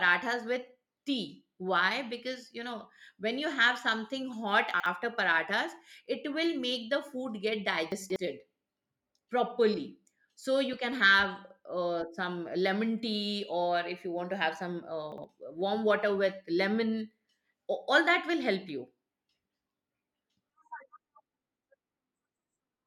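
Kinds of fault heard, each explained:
Chunks out of order: at 4.74, 7.92 and 15.12 s a 60 ms chunk plays late, briefly jumbling the speech.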